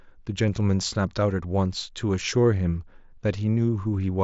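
Nothing goes wrong anywhere in this speech, which comes over a Bluetooth mSBC headset link with the usual wideband ceiling around 7.7 kHz and just the light graininess that codec leaves on louder moments.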